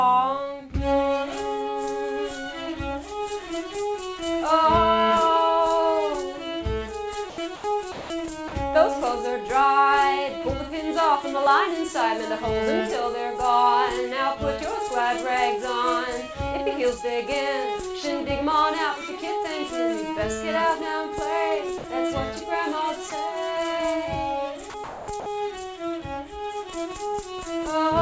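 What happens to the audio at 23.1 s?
At 23.1 s, about 20 ms of sound drops out and steady low noise briefly takes its place. This is likely sound dropped by the voice detector. The sender judged that instant to be background and stopped sending. The receiver filled the gap with comfort noise.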